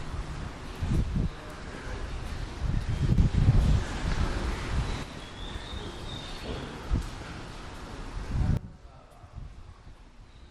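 At 3.18 s the level jumps up by about 6 dB and stays there until 5.03 s. At 8.57 s it drops by about 14 dB and stays low to the end. Both are sudden gain jumps. The sound and its background noise shift together. The likely cause is a gain change applied instantly, without a ramp.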